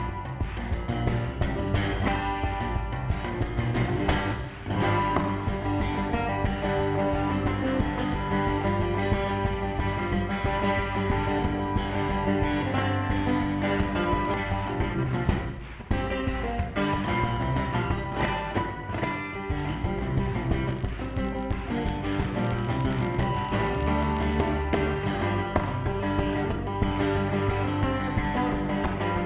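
At 14.34 to 14.36 s the audio skips ahead. Roughly 0.7 s of sound is gone, with no fill in the gap. The two sides of the cut are butted together, so playback jumps straight forward and the latency drops by about the same amount.

Right after, from 14.44 to 15.84 s, comes a jitter buffer speed-up. The buffer was holding too much audio. It trimmed short pitch-period pieces again and again, about a third of a second in total. The sound runs at 121% speed but keeps its pitch, so it feels rushed.

From 20.57 to 24.36 s there is a filter restarted on every block. The filter loses its memory at each block boundary and starts from zero. Each restart leaves a small click. Together they form a steady 50 Hz buzz that rises and falls with the signal level. Throughout the clip, nothing reaches above 4 kHz, which fits a G.711 mu-law call link at 64 kbps.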